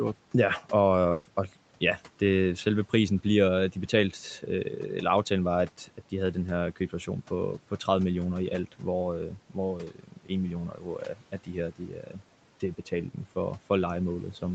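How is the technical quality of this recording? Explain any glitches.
The speech has two kinds of glitch: one short dropout near the start and four stretches where parts of the speech are swallowed. Audio reaches up to 8 kHz, as on an Opus call path, and room noise sits about 24 dB below the speech.

Burst of packet loss, 1.11 to 1.27 s, just before "og ja det selve": the last sound is held and fades for about 140 ms, then jumps ahead. A run of packets never arrived in time. The receiver stretched the last audio to cover the gap, and that stretch of speech is gone.

Speech cut by the noise suppressor, at 5.78 to 6.12 s (between "aftalen var" and "de havde den her"), 9.88 to 10.31 s, 10.70 to 11.49 s, and 11.71 to 12.21 s (before "det betaling"): syllables and word endings turn faint and swallowed, dipping by about 11 to 13 dB over about 100 to 300 milliseconds each time. The suppressor mistook quiet speech for background noise and turned it down.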